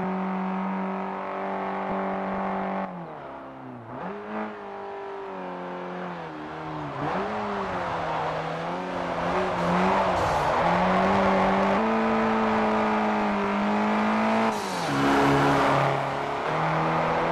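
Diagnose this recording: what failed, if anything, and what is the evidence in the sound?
DAB burbling at 1.92 to 2.66 s, 13.12 to 13.62 s and 16.67 to 17.12 s: a failure at the reception and codec stage. In each burst, short blips of noise burble over the programme in individual frequency bands. Weak reception let bit errors, at a rate of a fraction of a percent, slip past error correction into the MP2 data, corrupting samples and scale factors in single sub-bands.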